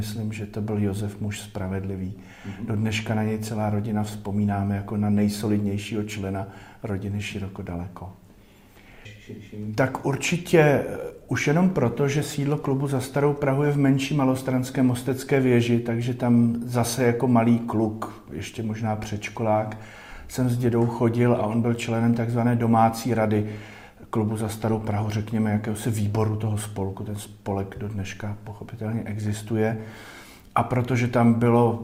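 No technical faults can be heard anywhere in the audio.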